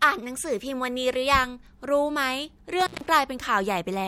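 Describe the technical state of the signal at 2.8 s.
At 2.8 s the speech is hit by an intermittent contact fault lasting from 2.80 to 3.06 s. A loose connection briefly breaks the signal path, so the audio drops out for about 144 ms, with crackle as the contact makes and breaks and faint hiss while it is open. On the waveform the signal collapses to near-flat between sharp spikes at the edges; a spectrogram shows a dark gap bracketed by broadband vertical clicks.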